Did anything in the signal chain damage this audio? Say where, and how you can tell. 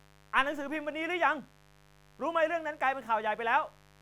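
Yes, in the analogue wiring. A steady, raspy mains buzz runs under the speech for the whole clip, about 30 dB below it. Its 50 Hz harmonic series points to switching spikes from a dimmer, rectifier or unshielded cable getting into the signal path.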